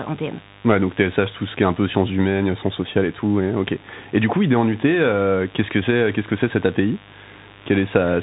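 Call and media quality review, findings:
Mains buzz, whole clip: raspy 50 Hz buzz around 20 dB below speech, harmonics into kilohertz range, so switching spikes from a dimmer or rectifier rather than a smooth hum.

Bluetooth CVSD headset codec, whole clip: nothing above 3.8 kHz, scratchy sibilants, granular hiss under the speech. The step-size distortion on loud highs sets it apart from plain band-limiting, and fits a 64 kbit/s CVSD link.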